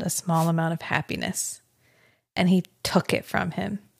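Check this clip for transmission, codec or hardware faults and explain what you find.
One fault stands out. From 0.33 to 0.51 s a short swish of static breaks over the speech: a wireless microphone noise hit. The FM radio signal faded as reflections cancelled at the receiver, letting its noise surge up.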